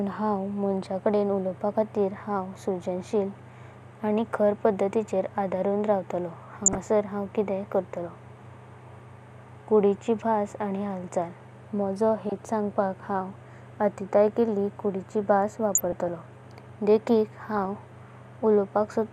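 DAB burbling at 6.66–6.78 s, 12.29–12.39 s, 15.75–16.08 s and 17.51–17.65 s: weak-reception bit errors corrupt MP2 sub-bands, producing brief blips of noise over the speech.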